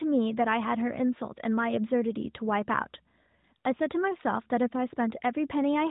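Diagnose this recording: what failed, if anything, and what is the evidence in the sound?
Nothing here has failed: the speech comes through without any breaks, glitches or damage that would point to a problem in the chain.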